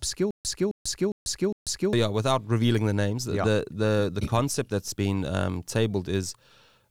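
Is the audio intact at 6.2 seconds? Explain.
Yes, at 6.2 seconds the speech plays through cleanly, with no dropout, click, distortion or other break in the audio at that moment.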